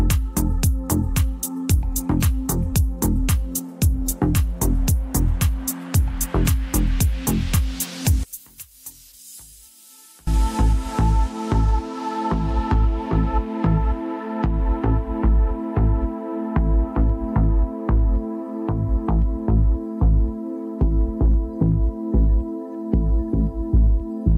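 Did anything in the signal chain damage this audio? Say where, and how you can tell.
Yes. One channel inverted, likely from a polarity reversal in the analogue wiring, from 8.23 to 10.27 s. With one side flipped, material common to both channels cancels when summed to mono, so the level drops by about 23 dB, leaving only a faint residue.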